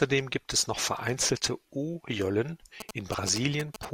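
From 2.80 to 3.85 s, GSM signalling bursts break in. A nearby 2G phone sends short radio bursts, the audio circuit rectifies them, and the result is a galloping dit-dit-dit of brief 217 Hz buzzes, somewhat below the speech level. Unlike steady mains hum, this buzz comes in stuttering groups.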